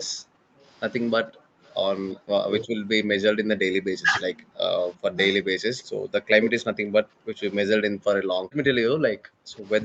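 Background gated by the echo canceller appears first, from 0.14 to 0.66 s. While loudspeaker audio was playing, the canceller clamped the microphone hard, and the room tone sinks by about 27 dB for roughly half a second before the gate releases and the ambience returns.

Speech suppressed in double talk follows, from 1.25 to 2.71 s. The speech dips and breaks into pieces, falling by roughly 40 dB at its deepest, with about 0.4 s affected in total. The likely cause is both ends talking at once, so the canceller could not separate the local talker from the loudspeaker echo and turned everything down.

The gating returns from 3.34 to 5.12 s, now cutting the background by about 40 dB across roughly 0.4 s in total. Inside that stretch, from 4.01 to 4.17 s, the speech itself dips by about 25 dB for around 0.15 s, likely the same double-talk suppression.

An echo leak is heard from 5.78 to 5.82 s. 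A faint, brief copy of the speech arrives 346 ms late, about 35 dB below the direct sound. This is likely loudspeaker pickup that the canceller failed to remove, sent back along the call.

Double-talk suppression strikes again from 5.93 to 6.96 s. The speech cuts in and out by roughly 40 dB over about 0.4 s in total, likely because both sides were talking together again.

Finally, from 7.24 to 9.55 s, the canceller gates the background, with drops of about 40 dB adding up to roughly a second of missing room sound.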